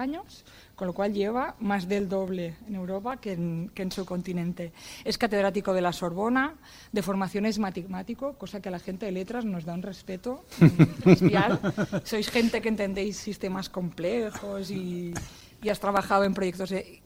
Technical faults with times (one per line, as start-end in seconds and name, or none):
1.72-3.67 CD scratch ticks
15.13-16.25 CD scratch ticks